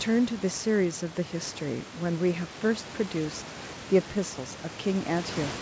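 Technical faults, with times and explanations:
No technical faults can be heard in this clip.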